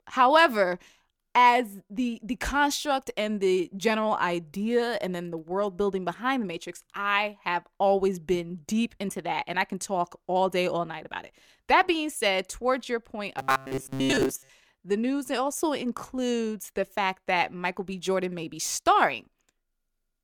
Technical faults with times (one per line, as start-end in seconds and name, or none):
13.39-14.49 robotic sound from repeated short buffers